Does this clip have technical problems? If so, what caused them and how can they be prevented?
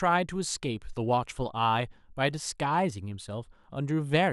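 No, there's nothing technically wrong to hear in this speech clip, so there's nothing to trace back or guard against here.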